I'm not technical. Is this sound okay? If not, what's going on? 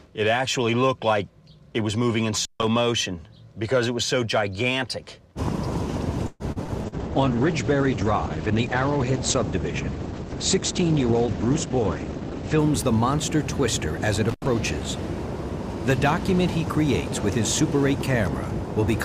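No, there are four kinds of problem.

At 2.36 to 2.67 s and again at 14.29 to 14.47 s, the sound crackles and drops out briefly. That's an intermittent contact: a loose cable or plug momentarily disconnecting.

From 6.27 to 6.95 s the audio turns choppy and robotic, with four small holes. That's repeated packet loss: bits of the call went missing, and the gaps were patched by continuing the last sound.

From 6.88 to 12.64 s everything sounds muffled and rough, losing its crisp top end. That's a call bitrate drop: the connection weakened, so the call sent far less detail.

From 11.14 to 13.06 s the audio runs slightly faster, about 4%, at the same pitch. That's a jitter buffer speed-up: the receiver trimmed tiny slices to catch up after a delay.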